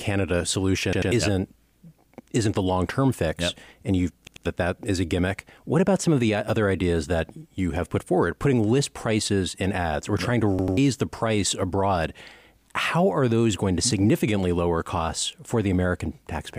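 Three repeated-buffer stutters: 0.93 to 1.12 s, 4.27 to 4.46 s after "term fix and you've", and 10.59 to 10.77 s after "ads or trying to". Each time, a 93 ms chunk (fits a 4096-sample buffer) plays twice more with hard joins, losing roughly a fifth of a second of speech.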